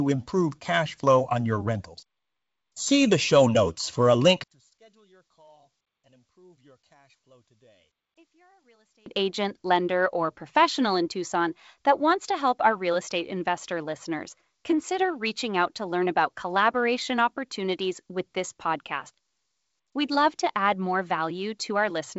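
After "show notes for a", from 4.44 to 9.06 s, the speech sinks about 37 dB to a faint residue until "agent lender or professional". The likely cause is one channel inverted, cancelling the centre in mono. The waveform goes nearly flat, and the spectrogram fades almost to nothing.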